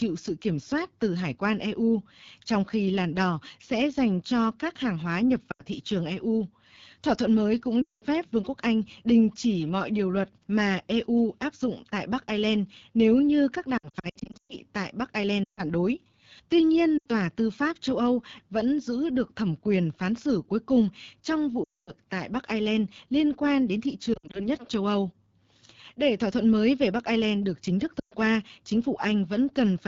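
The whole recording runs through the AMR wideband (HD Voice) codec at 8.85 kbit/s, one of its lowest rates. The speech model is starved of bits. The voice sounds rough and raspy throughout. The damage is plainly audible.

Lost AMR speech frames break the speech eight times. The decoder repeats the last good settings at falling gain, so the sound smears, warbles and fades before returning rough. The breaks fall at 5.51 to 5.63 s and 7.81 to 8.04 s after "thuận mới cũng". A scattered 0.78 s stretch runs from 13.77 s, with the longest gap 120 ms. Others fall at 15.44 to 15.61 s, 16.98 to 17.06 s, and 21.63 to 21.92 s after "xử cuối cùng trong". Another sits at 24.14 to 24.48 s, between "liên quan đến thị" and "nhất châu". The last is at 27.99 to 28.13 s.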